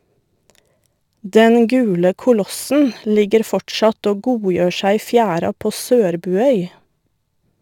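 Throughout the recording, the converter's sample clock wanders by a few microseconds, so each sample is taken slightly early or late at random. This is sample clock jitter, and the timing error matters most where the speech waveform changes fastest, leaving an error about 35 dB below the signal. It sounds like a fine hiss or grit riding on the speech, strongest on loud passages and bright sibilants, and it disappears in the pauses.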